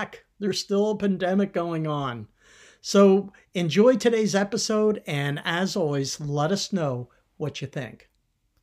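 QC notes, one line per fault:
No faults heard in this speech clip.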